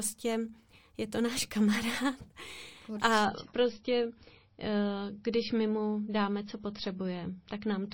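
At 3.25 s the speech drops abruptly, with no gap, into an adaptive stream at a lower bitrate until the end. The sudden loss of treble and the swirly codec artefacts point to a switch from roughly 128 to 24 kbit/s. A spectrogram shows content cut off sharply above 5.8 kHz.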